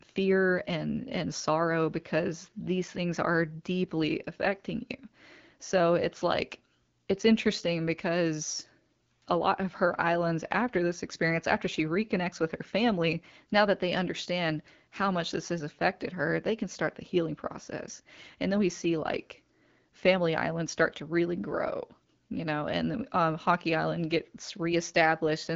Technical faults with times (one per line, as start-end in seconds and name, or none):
none